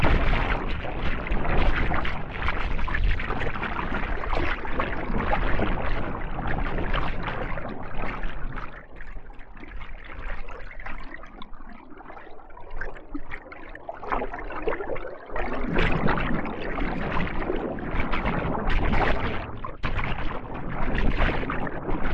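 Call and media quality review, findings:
Short concealed packet loss, 9.13–9.17 s: brief smear or wobble in the sound, with no silent hole. Probable component is receiver decoder concealment. About 20 ms never arrived; 16 ms was synthesized from preceding audio, then blended back. Unlike a hard dropout, there is no mute and no abrupt edge.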